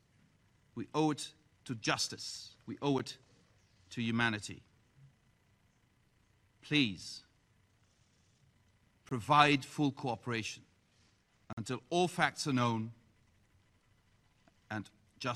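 Three blocks of digital silence cut through the sound: a brief tick at 2.99 s (about 10 ms), a short hole from 9.09 to 9.11 s (23 ms), and a longer one from 11.53 to 11.57 s (46 ms). The second and third gaps fit whole 1024- and 2048-sample buffers that were not filled in time. Unlike a faded dropout or concealed packet loss, each gap drops abruptly to silence and snaps back.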